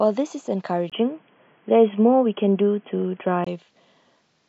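At 0.90 s, after a 20 ms gap, the speech turns boxy until 3.47 s, likely an input switched to a poorer device; the spectrogram stops at 3.3 kHz.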